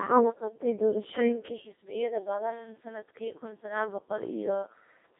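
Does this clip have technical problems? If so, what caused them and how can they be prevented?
Yes. Throughout the clip the speech sounds robotic and buzzy, with a synthetic edge, a narrow band running from about 150 Hz to 3.6 kHz, and nothing at all above 3.8 kHz. This is heavy Codec 2 vocoder damage. Instead of the waveform, only pitch, voicing, energy and a rough spectral envelope were sent, and the decoder rebuilt the voice from sine waves. The coarseness fits a low mode around 2.4 kbit/s. To prevent it, capture or transmit through a waveform codec at a higher bitrate.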